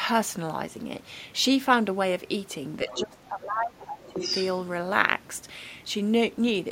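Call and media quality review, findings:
Speech suppressed in double talk, 2.87–4.18 s: talker's level ducks by up to around 20 dB, patchy across roughly a second and a half. Likely echo canceller unable to separate near-end speech from loudspeaker echo, attenuating both during overlap.

Other side's voice leaking through, 2.89–3.02 s: brief far-end fragment, roughly 10 dB under the talker. 4.03–4.45 s: longer, stronger leak, only about 5 dB down. Likely residual loudspeaker echo the canceller failed to remove from the microphone path.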